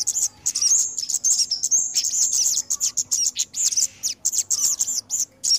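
The audio shows no audible technical faults.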